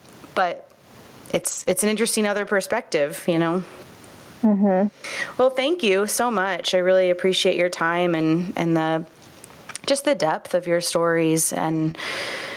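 Gain pumping runs through the whole clip: the level swings by around 20 dB, with loud and soft parts pulled closer in level and the sound squashed. This is likely an input gain set far too high, with a fast limiter clamping down on every peak. The room noise sits about 44 dB below the speech.

Lost packets rebuilt from error correction occur at 0.37–0.43 s, 1.35–1.61 s, 1.67–1.73 s, 2.33–2.51 s, 6.45–6.47 s (between "thank you so" and "I really appreciate your"), 8.15–8.21 s and 11.71–11.89 s (after "depth of your stories"). In each case the following packet carried a low-bitrate copy, so there is no gap, only a rougher, noisier patch.

Short concealed packet loss appears at 1.63–1.67 s and 11.91–11.96 s, just after "depth of your stories". About 20 ms never arrived in time, so the decoder extended the preceding sound and blended it back into the real audio, giving a brief smear.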